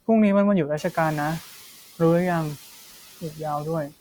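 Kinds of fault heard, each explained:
Noise suppressor catching up: The room noise jumps by about 19 dB near one second. The suppressor's noise estimate lags behind. From 0.77 to 1.41 s the noise passes with less reduction, then sinks by about 5 dB over 640 ms.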